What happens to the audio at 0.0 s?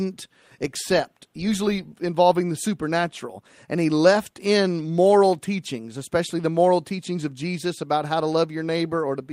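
Nothing goes wrong at 0.0 s; the audio is clean there with no audible fault.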